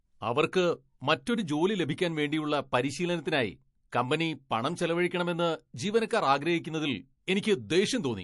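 Throughout the speech, the sound is watery and swirly, with metallic chirps on s sounds. This is MP3 compression, likely at a low bitrate that fits about 48 kbps. Starved of bits, the encoder drops weak components that flicker between frames.

From 6.08 to 6.11 s, just after "പരിശീലനത്തിനായി കമ്പനി പണം ചെലവഴിക്കണമെന്ന്", a sharp attack is preceded by a brief hiss about 16 dB above the quiet before it. This is pre-echo. The encoder kept its long blocks, so noise sized for the loud onset spread into the gap before it.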